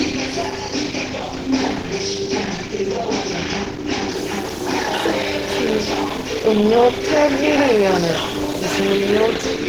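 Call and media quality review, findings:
Opus compression, whole clip. Everyday sounds grainy, rough and noisy rather than swirly; damage plainly audible. Likely cause: Opus in hybrid mode, a low-rate blend of speech and music coding that fits about 16 kbps. Band energies kept, detail filled with folded or synthetic noise. Content reaches about 20.2 kHz, so roughness, not bandwidth loss, is the symptom.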